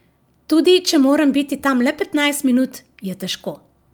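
Clock drift between sender and receiver runs throughout this speech: the sender's clock is about 4 percent fast, so the receiver's buffer keeps overfilling. Unlike packet loss, nothing drops out abruptly. From 0.03 to 3.75 s, repeated timing corrections trim short pieces to keep pace with the 104 percent rate, heard as small uneven hiccups rather than the steady pitch shift of a wrong sample rate.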